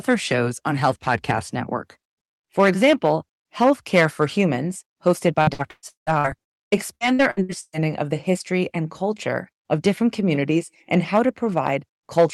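From 5.41 to 7.88 s, repeated packet loss (robotic sound) sets in: more than a dozen holes open up, the longest 179 ms, and each is papered over by extending the last sound. About two fifths of that stretch turns choppy, clearing just before "of the history and".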